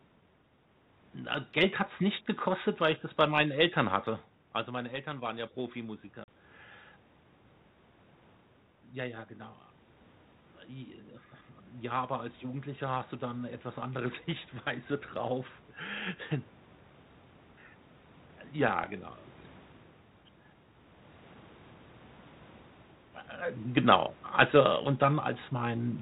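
Speech on a narrowband call whose light hiss and absence of anything above 4 kHz fit G.726 ADPCM at 32 kbit/s. Automatic gain rising occurs twice. From 4.66 to 6.1 s, after the talker moves away around 4 s and the input drops by about 10 dB, the gain control lifts level by about 4 dB, swelling voice and room noise together. A second, slower rise of about 4 dB runs from 12.41 to 15.5 s. Packet loss on the ADPCM call leaves a hard-edged 40 ms silent hole at 6.24 to 6.29 s, which fits about two lost packets. Because the decoder's predictor and step size lose track of the sender's across the gap, the speech comes back slightly distorted before settling.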